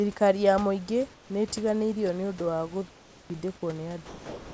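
From 1.14 to 1.30 s and again from 2.90 to 3.30 s, the room background gives way to a smooth, featureless hiss, about 4 dB and then about 5 dB quieter. This is comfort noise in place of the background, likely from discontinuous transmission, with synthetic noise filling pauses the sender stopped sending.

From 4.06 s to the end, about 280 ms of the trailing speech disappears into the same steady noise. That is sound dropped by the voice detector: it likely mistook the sound for background and cut transmission.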